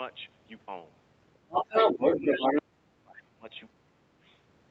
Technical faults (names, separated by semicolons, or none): other side's voice leaking through; speech suppressed in double talk